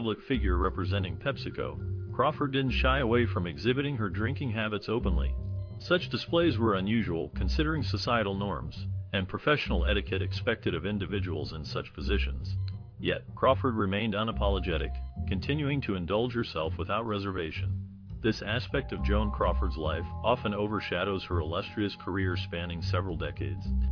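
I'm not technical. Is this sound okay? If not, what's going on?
Yes, no faults heard.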